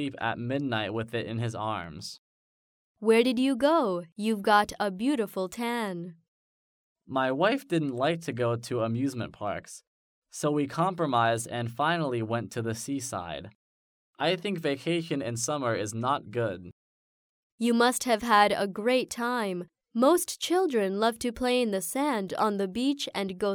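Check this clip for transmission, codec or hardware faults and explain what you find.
There's one fault, clock slip clicks, running from 0.11 s to 23.52 s. A tick arrives roughly every 50 ms, so it blurs into a soft rattle over louder passages. The likely cause is two unsynchronised device clocks drifting by a few hundred ppm, forcing single-sample drops or repeats.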